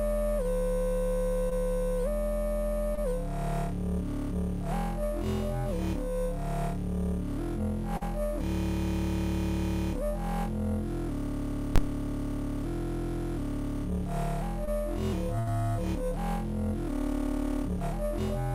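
Short concealed packet loss appears at 1.49, 2.95 and 7.97 s. About 20, 20 and 40 ms of audio never arrived in time. The receiver patched each hole by extending the preceding sound and then blending back. Each is heard as a brief smear or wobble.

At 11.76 to 11.78 s there are invalid numbers at full scale. A calculation went infinite or invalid, pinning a 20 ms block at maximum level. The block is so short that it lands as a single loud bang.

Another short concealed packet loss follows at 14.65 s, with about 20 ms lost and bridged the same way.

A burst of packet loss runs from 15.39 to 15.49 s. About 80 ms went missing in a row. The receiver continued the last sound while fading it, giving a held buzz or fading hiss. The audio then resumes further on, with the gap's content gone.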